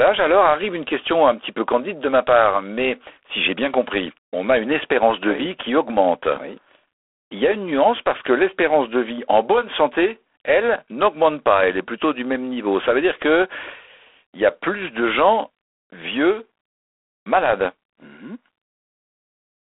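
From start to finish the speech carries G.726 ADPCM coding damage, with a rasping, harsh hiss that rises and falls with the level of the speech. The coder sends each sample as a few bits describing its difference from an adaptive prediction, and with so few bits the quantisation error becomes plainly audible; the roughness fits the 24 kbit/s rate. The sound sits in a telephone band of roughly 300 Hz to 3.4 kHz, with nothing above 3.8 kHz.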